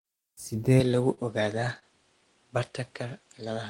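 At 0.8 s the sound abruptly becomes duller and a little quieter, by roughly 5 dB. A new, faint noise floor, about 40 dB under the signal, stays until the end. There is no silence at the change. This is likely an input switched to a poorer device. Unlike an equaliser or codec change, the tone, level and background noise all shift together at one instant.

From 0.91 to 1.84 s the audio stalls repeatedly. There are five short holds, about 83 ms in total, and the longest is 29 ms. Each time, the last sound is stretched until playback can continue. This is repeated stalls (stutter), where the jitter buffer ran dry over and over as packets arrived late. Unlike packet loss, nothing is cut out. The sound only drags and hiccups, with about 9% of that stretch filled in.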